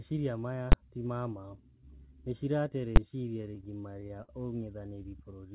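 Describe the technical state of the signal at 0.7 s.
At 0.72 s, invalid numbers at full scale pin one 12 ms block, which fits a 512-sample buffer, to one extreme value far beyond the speech peaks: a single bang, flat-topped rather than a brief click.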